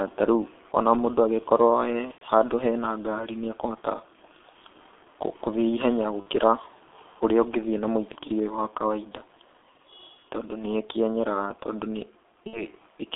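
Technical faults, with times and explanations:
Throughout: G.723.1 codec. The speech went through an early internet-telephony codec at 6.3 kbit/s, which packs the signal into 30 ms frames and keeps only a coarse, slowly updated model of the voice. The line band runs from about 200 Hz to 3.6 kHz. Nothing above that survives, so the speech is muffled and hoarse. The coding damage is heavy, and consonants come out smeared rather than crisp.
2.12–2.23 s, 6.20–6.27 s, 12.47–12.65 s: VoIP packet loss concealed by the speech codec. Packets went missing: roughly 90 ms at the first point and 60 ms at each of the other two. The decoder filled each gap by repeating its last pitch and filter settings at lower gain with every frame. Each gap therefore turns into a buzzy, stretched tone or coloured noise that fades away. Because each frame builds on the one before, the speech stays weak and distorted for a short while after normal packets resume.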